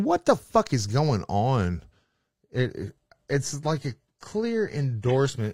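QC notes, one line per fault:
1.91–5.53 s, adaptive stream at a lower bitrate: after "fuck is going on" the speech turns suddenly duller, with nothing above 14.9 kHz, which fits a switch to a low-bitrate HE-AAC version. There is no gap, unlike a dropout, and the drop holds to the end.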